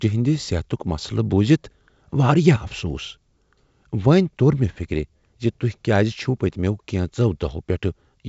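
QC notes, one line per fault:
The speech carries G.722 wideband telephone coding, with the spectrum ending near 7.7 kHz and at most a faint coding texture, which fits the codec's full 64 kbit/s mode.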